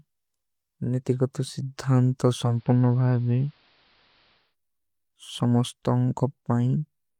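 After "ନିତିଗତ ସିଧ୍ଧାନ ତୋ", from 2.37 to 4.56 s, digital radio blends to analogue AM. The fade takes 259 ms. Treble is cut. Faint hiss appears. Level drops about 1 dB.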